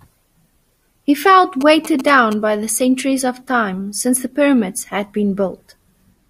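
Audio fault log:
1.61–2.34 s, GSM signalling bursts: a galloping dit-dit-dit of short buzzes sits roughly 10 dB below the speech. A nearby 2G phone is exchanging brief signalling bursts with the network, and the audio circuitry rectifies the radio energy into clicks repeating at about 217 Hz. Mains hum would be a steady, lower tone. A phone in an active call would produce a continuous 217 Hz buzz, not this stop-start, clustered rhythm.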